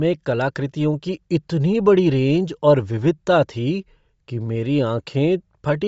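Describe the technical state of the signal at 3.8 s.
At 3.8 s, as throughout, the speech carries likely Bluetooth LC3 compression: noise substituted for its discarded upper band gives a plainly grainy, breathy edge, consistent with about 32 kbps.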